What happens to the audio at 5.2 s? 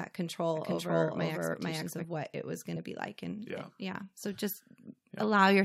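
Nothing goes wrong at 5.2 s; the speech carries on intact through that moment.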